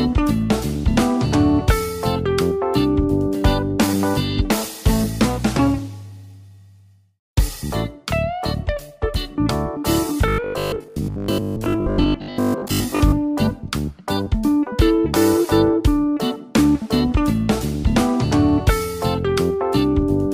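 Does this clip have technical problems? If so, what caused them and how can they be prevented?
Yes. From 10.28 to 13.12 s there is robotic sound from repeated short buffers, likely caused by audio arriving too slowly, so each 20 ms block is replayed while the real material is skipped, making roughly 70 percent of the span repeated audio. This imposes a rigid 50 Hz buzz, which on a spectrogram appears as evenly spaced horizontal harmonics every 50 Hz and on a waveform as identical 20 ms segments repeating. Preventing it means giving the audio path enough buffering and processing headroom that new blocks always arrive on time.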